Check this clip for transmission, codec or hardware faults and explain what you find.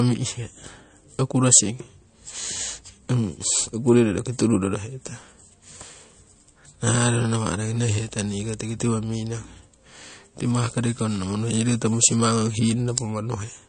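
One fault runs through the whole clip: MP3 compression. An MP3 encoder short of bits, which fits a low rate around 40 kbps, likely cut everything above 9.1 kHz and dropped weak frequency lines frame to frame, leaving the speech dull, watery and swirly.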